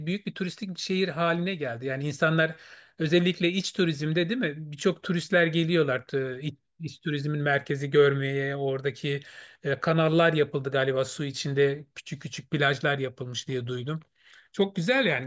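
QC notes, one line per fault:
No faults found.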